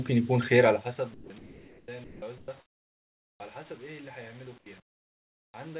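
At 1.14 to 1.30 s, about 80 ms of real sound vanishes into flat hiss: sound dropped by the voice detector, likely because the sender judged a quiet stretch to be background and stopped sending. Unlike an ordinary comfort-noise pause, actual signal is missing here. The same happens at 2.04 to 2.22 s, costing about 100 ms.

Comfort noise in place of the background fills 1.38 to 1.88 s, 2.38 to 2.48 s, 2.60 to 3.40 s, 4.58 to 4.66 s and 4.80 to 5.54 s, likely from discontinuous transmission. The textured room tone turns steady and featureless, and it drops by about 3, 6, 18, 12 and 14 dB respectively. No sound is lost, only the background.

At 3.36 to 3.40 s comes an onset clipped by the voice detector, likely from its slow reaction. The first 40 ms are lost, so the sound jumps in hard without its soft beginning.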